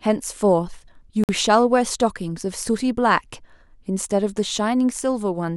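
A speech recording with one dropout: from 1.24 to 1.29 s the sound cuts to silence for 52 ms, then resumes. The likely cause is a Bluetooth stall, where the headphone buffer emptied while packets were resent. It shows as a flat gap in the waveform and a blank vertical band on the spectrogram.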